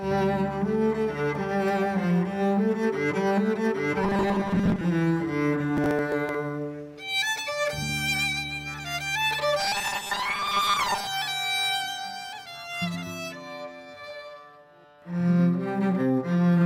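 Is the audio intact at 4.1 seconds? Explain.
No, from 4.04 to 4.81 s there's robotic sound from repeated short buffers: a rigid 200 Hz buzz, likely from a 5 ms chunk looping while most real audio gets skipped.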